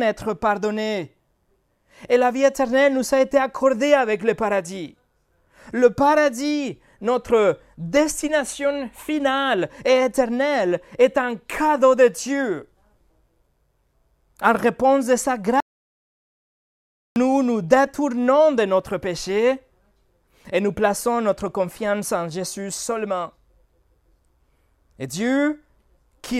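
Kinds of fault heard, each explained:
Audio dropout to silence: the speech breaks off just after "réponse de sa" at about 15.60 s and falls into silence, with no room tone at all, until it resumes at 17.16 s on "nous détournons de notre". That is roughly 1.56 s of silence, and whatever was said in that stretch is simply missing. The abrupt cut and the absence of any background point to the input signal being lost while recording continued, likely a disconnected source, a dropped link or an accidental mute.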